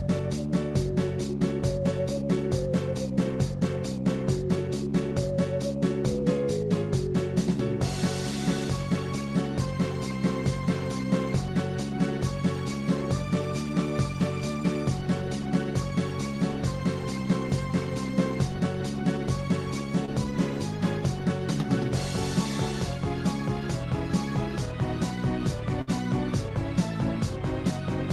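At 20.05 to 20.09 s there is a short concealed packet loss: about 20 ms of audio arrived too late to be decoded, and the receiver covered the hole by extending the preceding sound for about 20 ms before blending back into the real signal. It is heard as a tiny smear or wobble. On a spectrogram the harmonics or noise texture run on unnaturally smooth across the gap, with a faint seam where the real frames resume.

At 25.81 to 25.89 s comes a burst of packet loss, about 60 ms of consecutive audio missing. The receiver synthesised about 56 ms of continuation from the last good sound, lowering its level as the gap lengthened, so the sound briefly hangs as a held, fading buzz or hiss and then picks up further on, with the material in between gone. The waveform shows a tapering envelope and then an abrupt resumption. A spectrogram shows a flat, frozen band decaying into the restart.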